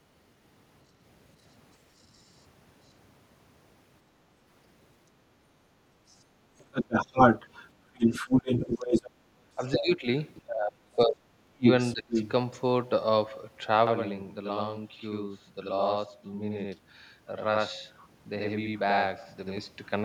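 Other side's voice leaking through first appears from 1.98 to 2.42 s, very faint, far below the talker. It is likely an echo canceller failing to strip the loudspeaker playback from the microphone. On a spectrogram it shows as a weak second harmonic pattern unrelated to the main speech. From 6.08 to 9.10 s the leak is loud, a little above the talker's own level, and the waveform carries a second voice.

Speech suppressed in double talk runs from 8.79 to 12.15 s, overlapping that loud leak. With both sides active, the canceller likely could not tell its talker from the echo and attenuated everything. The dips add up to about two seconds, the deepest around 30 dB. The talker drops out in pieces and loses brightness, seen as gouged envelope sections and upper bands going dark. Within and just after this stretch the leak returns briefly at 10.36 to 10.42 s, faintly, and from 11.64 to 12.31 s at roughly equal level with the talker.

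Channel delay (doubling) covers 13.87 to 19.58 s. One channel lags by 85.33 ms, which fits a 4096-sample buffer, and the mono sum gives a slap echo at equal level. The spectrogram shows every onset repeated 85 ms later, and the waveform shows doubled attacks. Faint leaks also occur at 16.28 to 16.79 s and 17.97 to 18.08 s.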